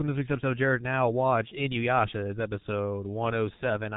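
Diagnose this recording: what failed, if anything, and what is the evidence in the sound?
G.723.1 codec damage runs through the whole speech clip, placing the failure at the codec stage. The sound stops at about 3.8 kHz, so sibilants and the upper edge of consonants are missing, and the damage is heavy: a muffled, hoarse texture with smeared consonant onsets, which fits a bitrate of roughly 6 kbit/s. The coder analyses speech in 30 ms frames and refits its vocal model only that often, so fast articulation blurs between updates.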